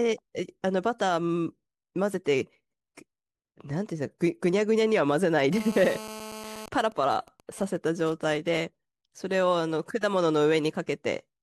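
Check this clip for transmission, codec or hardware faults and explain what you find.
Two episodes of mobile-phone interference appear in this speech, both from a nearby 2G handset.

GSM phone buzz runs from 5.53 to 6.62 s. The phone transmits bursts 217 times a second during a call, and the audio circuitry rectifies them into a hard, raspy 217 Hz buzz rich in harmonics, about 13 dB below the speech. Unlike mains hum, it is coarse and edgy rather than smooth, and its pitch has no relation to 50 or 60 Hz.

GSM signalling bursts follow directly, from 6.62 to 8.60 s, while the talker on the call is silent. The handset then sends only short groups of bursts, so the rectified interference becomes even ticks with a longer 217 Hz buzz twice a second, around 20 dB below the speech. This broken rhythm is what separates it from the continuous buzz just before.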